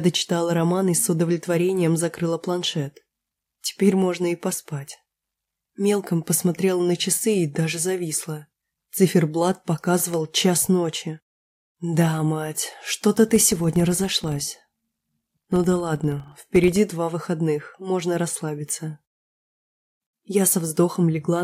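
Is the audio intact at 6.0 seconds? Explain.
Yes, the audio is intact at 6.0 seconds, with nothing faulty heard at that point.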